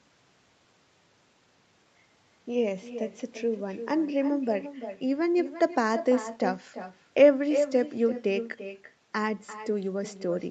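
Throughout the speech, an echo with no canceller shadows every phrase. The far end's loudspeaker feeds its microphone, returning the sound roughly a third of a second later, about 11 dB down and thinner. Spectrograms show each syllable faintly duplicated just behind itself.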